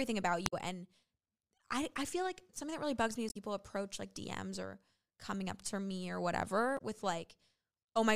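Three short bursts of damaged data in the compressed stream: 0.43 to 0.53 s, 3.26 to 3.37 s after "that really bugs me", and 6.74 to 6.81 s after "up to me or". Each time the decoder hits corrupted frames, loses sync, and briefly garbles the audio before catching the next header.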